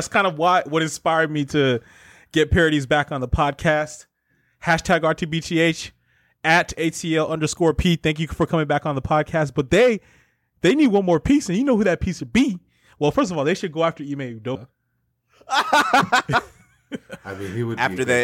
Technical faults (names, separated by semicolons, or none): CD skip